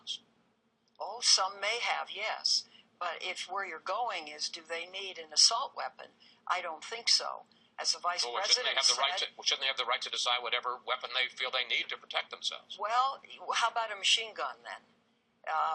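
Nothing in this one calls for comment: the audio runs along without a single technical fault to point to at any moment.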